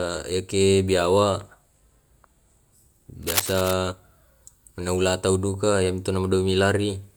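From 3.23 to 3.74 s a dense, uneven scratching and rustling sits over the speech, nearly as loud as the talker. This is cable scratch noise, likely from a worn cable or connector being moved so its contact resistance fluctuated rapidly.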